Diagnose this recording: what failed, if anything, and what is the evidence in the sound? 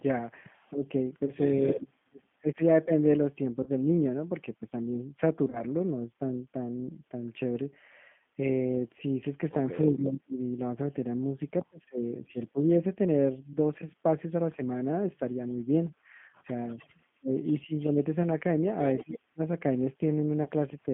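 The whole clip has been through a G.729 codec; the sound fits G.729A at 8 kbit/s. That's a codec-stage fault you hear everywhere: the speech sits in a narrow phone band of roughly 150 Hz to 3.5 kHz, with nothing up top, and it has that plainly rough, slightly synthetic edge you get when a pitch predictor and a handful of pulses per frame try to rebuild a voice.

Call processing is the next suspect, with speech suppressed in double talk, twice. From 0 to 2.9 s, and again from 16.76 to 19.4 s, the talker dips hard in patches, around 30 dB at the deepest, about a second's worth in the first stretch and under a second in the second. That's likely an echo canceller that couldn't tell the near talker from loudspeaker echo while both sides were talking, so it ducked everything.

Call processing also seems to have let an echo leak through. Between 0.6 and 1.86 s there's a faint delayed copy of the voice trailing by about 280 ms, about 25 dB down. 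Another, much quieter one, about 40 dB down, shows up between 9.98 and 10.92 s at a delay near 292 ms. The likely story is a speakerphone whose canceller didn't fully strip what its mic picked up, sending it straight back.

On the network side, there's VoIP packet loss concealed by the speech codec at 1.25, 3.63, 5.5 and 20.43 s. Each gap is about 30 ms, which fits a single lost packet. The decoder papers over it by stretching the last pitch and filter into a buzzy tone or coloured noise that fades, and because each frame leans on the one before, the voice stays weak or smeared for tens of milliseconds or more after the audio comes back.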